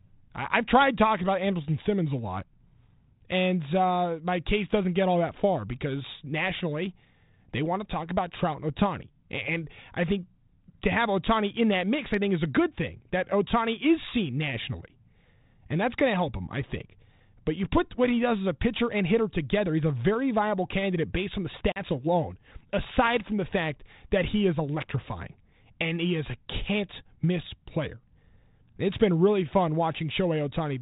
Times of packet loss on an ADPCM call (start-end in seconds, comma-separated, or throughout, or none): 21.72-21.83